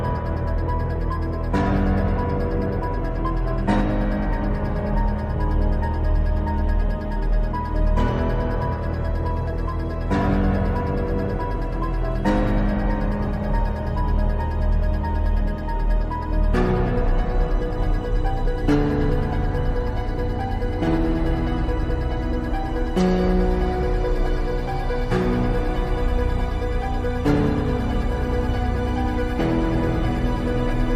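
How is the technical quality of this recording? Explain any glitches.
No glitches or technical faults turn up anywhere in the recording; the signal stays intact and continuous throughout.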